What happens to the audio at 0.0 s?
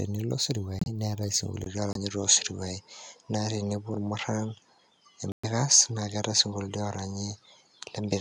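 Nothing goes wrong at 0.0 s; the audio is intact there with no audible fault.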